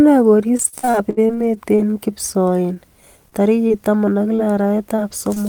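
Repeated packet loss (robotic sound) runs from 0.57 to 1.95 s. About a dozen holes, the longest 72 ms, were patched by extending the preceding speech, so nearly a quarter of that stretch is synthetic fill. The speech turns choppy, with fragments missing.

Short concealed packet loss follows at 3.30–3.34, 3.68–3.72, 4.36–4.40, 4.96–5.00 and 5.34–5.38 s. Each time, roughly 20 ms never arrived and the decoder bridged the hole from the last sound before blending back, leaving a brief smear or wobble.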